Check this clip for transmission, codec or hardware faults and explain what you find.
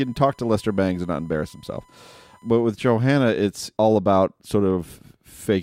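There is one hardware fault: USB whine from 0.0 to 2.61 s. Current drawn by the USB bus in 1 ms frames leaks into the audio through power or ground, giving a steady 1 kHz whine sitting about 35 dB below the speech.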